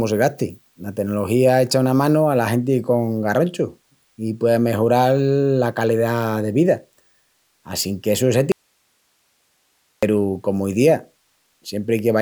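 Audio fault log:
8.52–10.03 s, audio dropout to a faint residue: after "essu es" the speech drops out abruptly, leaving only hiss about 45 dB down, likely a lost signal on a still-live path.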